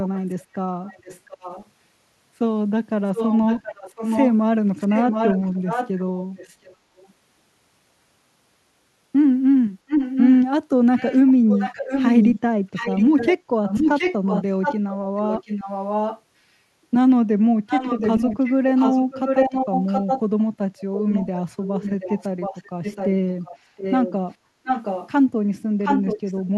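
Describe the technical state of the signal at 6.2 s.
At 6.2 s the signal carries an echo leak, running from 3.15 to 7.09 s: a delayed copy of the speech arrives about 0.72 s behind the original, only slightly quieter than it. The likely cause is a loudspeaker-to-microphone path at the far end that the echo canceller failed to suppress.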